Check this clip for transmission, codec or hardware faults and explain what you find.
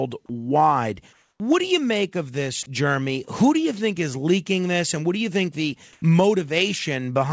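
Three voice-detector faults appear in this speech, heard over a call path whose band stops at 8 kHz, which fits a wideband codec such as G.722.

Comfort noise in place of the background, 1.13 to 1.40 s and 5.93 to 6.02 s: transmission likely paused during silence, so the receiver generated steady, featureless noise. It is about 4 dB quieter before "do you make of", and about 7 dB louder after "do you think the".

Onset clipped by the voice detector, 1.37 to 1.40 s: the detector was likely slow to notice sound resuming, so 30 ms went unsent and the start arrives abruptly.

Sound dropped by the voice detector, 2.63 to 2.66 s, after "you make of this": the detector likely mistook the sound for background, and 20 ms of sound gives way to noise.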